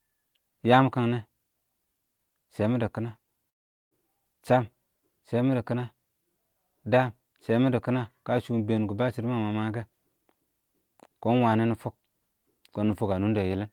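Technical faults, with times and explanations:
3.49 to 3.94 s: long network dropout. The sound smears into a fading buzz, then silence. Likely lost packets; about 0.42 s never returns.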